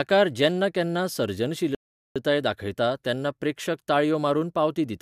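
From 1.75 to 2.16 s a rebuffering stall starves playback: a flat, empty gap in waveform and spectrogram, then the speech resumes where it stopped.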